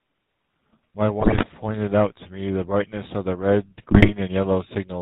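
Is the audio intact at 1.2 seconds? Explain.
No, from 1.2 to 1.45 s there are GSM bit errors: corrupted filter, pitch and gain values bend or spike frames, so the sound squawks, pops and gargles, consistent with a badly degraded link. Underneath that, the GSM full-rate codec's pulse-driven vocal-tract model gives a plainly buzzy, gravelly quality with nothing above 4 kHz, typical of a 13 kbps stream.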